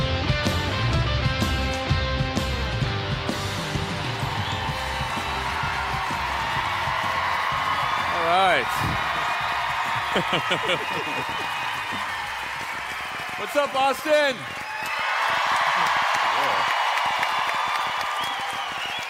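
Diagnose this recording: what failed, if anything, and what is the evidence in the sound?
A train of clicks runs from 3.86 s to 19.0 s. Similar pulses arrive unevenly, about 10.4 per second, roughly 150 in all, reaching about 5 dB above the sound. The likely stage is analogue: nearby interference, a faulty connection or power supply injecting pulses.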